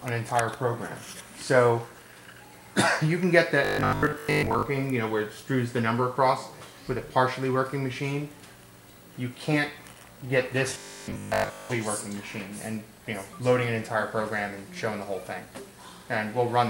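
From 3.65 to 4.65 s and 10.70 to 11.70 s the audio becomes a rigid, metallic 50 Hz buzz: robotic sound from repeated short buffers, likely from audio arriving too seldom, so 20 ms chunks repeat through most of the first span and all of the second.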